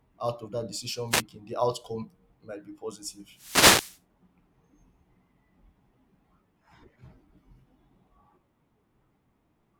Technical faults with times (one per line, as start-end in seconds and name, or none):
1.10-1.22 wireless microphone noise hit
3.32-4.01 wireless microphone noise hit